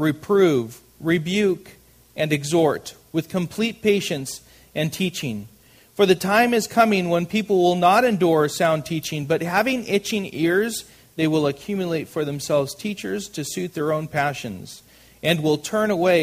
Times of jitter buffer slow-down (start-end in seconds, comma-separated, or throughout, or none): none